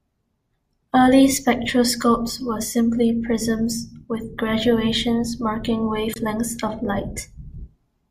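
At 6.13 to 6.16 s the speech is interrupted by a short chirp or burst of noise peaking around -15 dBFS: a corrupt frame decoded. Flipped bits in roughly two compressed frames were decoded anyway, misread gains and codes putting energy at wrong frequencies for that span.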